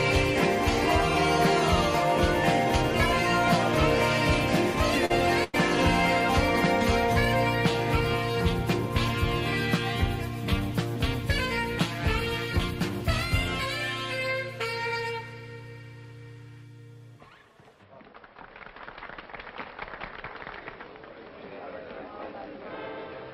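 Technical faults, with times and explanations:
5.05–5.12 s, short concealed packet loss: a brief smear in the sound, lasting about 43 ms. Around 40 ms of audio never arrived in time, so the receiver extended the preceding sound to cover the hole and blended back into the real signal.
5.44–5.55 s, burst of packet loss: the sound stalls into a held, fading tail for about 97 ms, then jumps ahead. A run of roughly 100 ms went missing together; the receiver stretched the last sound, turning it down as the gap lengthened, and the audio in between is lost.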